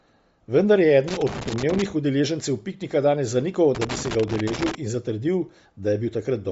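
Across the whole speech clip the band stops dead near 7.7 kHz, and what sits just below that edge sounds grainy and breathy rather than simply dull. That texture comes from a transform codec discarding upper spectral detail and filling the gaps with shaped noise, which points to Bluetooth LC3 compression running at a low rate, likely around 32 kbps with 10 ms frames. A plain low-pass filter would sound muffled but clean, not fizzy.

From 1.08 to 1.82 s, and again from 3.75 to 4.75 s, an irregular scratching crackle breaks into the sound. This is loose connector crackle: a worn or dirty contact rapidly making and breaking, chopping the signal. Its uneven, bursty rhythm and the way it comes and goes in two separate episodes set it apart from steady digital clicks or dropouts.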